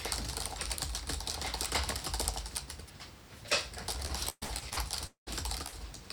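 From 4.05 to 5.29 s the sound turns choppy, with a stuttering texture. This is repeated packet loss: seven gaps, the longest about 200 ms, were each patched by extending the preceding sound, covering about 40% of the stretch and dropping roughly half a second.

At 5.67 to 5.74 s the last sound is briefly held and fades before the audio jumps ahead. This is a burst of packet loss: about 55 ms was filled by continuing and attenuating the last sound, while 60 ms of the original audio is missing.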